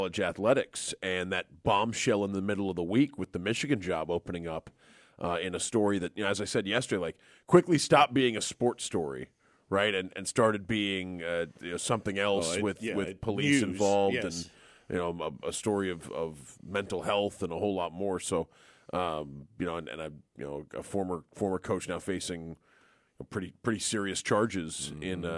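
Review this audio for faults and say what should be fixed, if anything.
Nothing stood out on listening, so there is nothing here that needs fixing.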